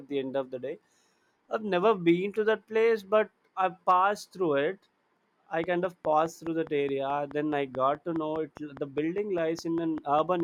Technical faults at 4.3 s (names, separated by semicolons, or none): none